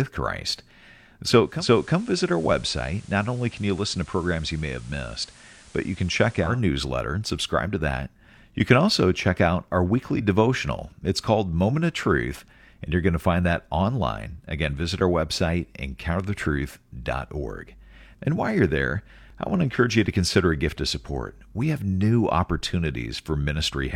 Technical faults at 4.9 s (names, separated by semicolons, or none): digital radio blending to analogue